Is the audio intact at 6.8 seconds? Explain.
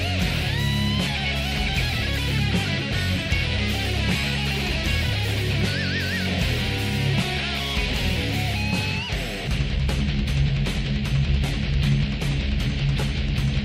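Yes, the audio is intact at 6.8 seconds, with no dropout, click, distortion or other fault to be heard at that point.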